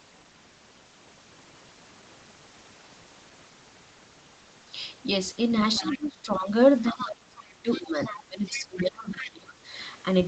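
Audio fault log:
5.75 to 6.06 s, 6.86 to 7.07 s, 7.72 to 7.82 s, 8.04 to 8.23 s, 8.46 to 8.80 s and 9.20 to 9.27 s: other side's voice leaking through. Short scraps of a second voice surface under the talker. They sit about 10 to 15 dB below the main speech. The likely cause is a loudspeaker on the talker's device feeding the far end back into the microphone. The echo canceller left part of it behind. Like the rest of the audio, the scraps stop at 8 kHz.
5.79 to 6.51 s and 6.84 to 9.74 s: speech suppressed in double talk. The talker's level sinks while the leaked voice is present. The first dip reaches about 20 dB over roughly 0.7 s. The second, longer stretch drops as deep as about 30 dB and pulls the voice down for around two seconds in total. The likely cause is the echo canceller failing to tell the talker from the echo and turning both down.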